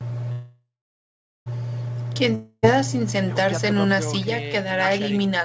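From 0.32 to 1.48 s the speech hangs as a fading buzz, then goes silent, and resumes where it stopped: a call audio freeze, likely from delayed packets.

At 2.35 to 2.66 s another fading buzz appears, and about 0.28 s of speech is skipped: a long network dropout, likely from lost packets.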